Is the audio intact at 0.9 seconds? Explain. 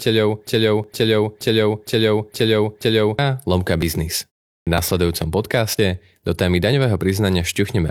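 No. A player or stream stall likely left the system resending its last fragment, so a 0.47 s broken-record loop, already running at the start, repeats until 3.19 s. Just before, overlapping segment time stamps at 0.84–0.88 s cut away a sliver of real sound, leaving a small skip.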